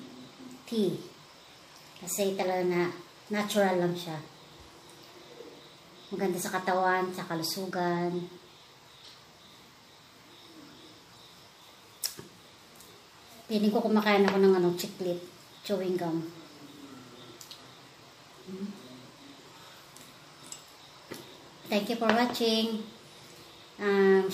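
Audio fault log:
14.80 s, corrupt frame decoded: a brief blip, peaking at about -20 dBFS, lasting a couple of compressed frames. Flipped bits in those frames were decoded anyway, so misread gains and spectral codes put energy at wrong frequencies until clean frames resumed.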